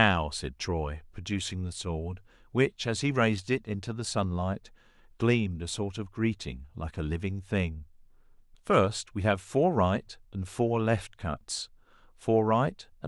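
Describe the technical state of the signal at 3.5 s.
At 3.5 s the speech signal is intact, with no audible dropout, distortion, or other technical fault at that moment.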